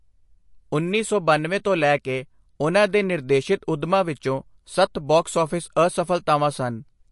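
MP3 compression artefacts run throughout this speech clip, and the damage is plainly audible. The sound has a watery, swirling quality where faint frequency detail flickers in and out between frames, and nothing is present above about 11.3 kHz, leaving the top end dull. The likely cause is an encoder starved of bits, consistent with a low bitrate around 48 kbps, which cuts the treble at a fixed point and discards weaker components to fit its budget.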